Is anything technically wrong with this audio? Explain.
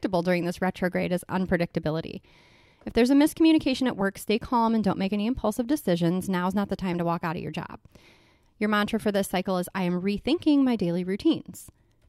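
No, nothing technically wrong can be heard in this speech recording. No dropouts, glitches or other technical faults turn up anywhere in it.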